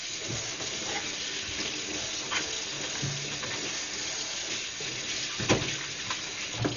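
From start to finish, the audio appears to have passed through a starved transform codec, likely Dolby Digital compression, at a rate low enough to fit roughly 40 kbps. With too few bits, the encoder gives up the top of the band and leaves many frequency lines without real detail, so the decoder fills them with noise. Nothing remains above 6.9 kHz, leaving the everyday sounds dull, and the heavy damage adds a rough, fluttering grain around tonal parts.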